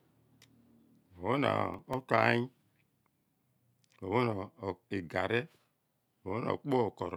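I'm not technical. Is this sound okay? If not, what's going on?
No. From 1.74 to 1.94 s there is processor overload crackle: the computer fell behind and missed a handful of its very short audio deadlines in a row, replaying stale scraps of sound each time, so the speech gets a brief gritty, crackling tear.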